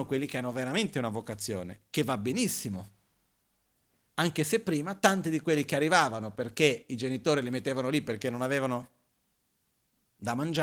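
Nothing in the speech stands out as a technical fault.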